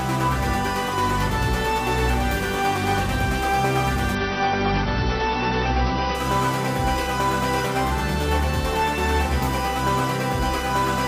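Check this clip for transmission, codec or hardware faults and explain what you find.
One fault stands out: an adaptive stream at a lower bitrate from 4.15 to 6.15 s. The slowed connection forced a leaner encoding, consistent with AAC dropping from 96 to 24 kbit/s. Everything above 6 kHz vanishes, the top turns dull, and the change is abrupt but gapless. On a spectrogram, content is sliced flat at 6 kHz for two seconds; the waveform stays continuous.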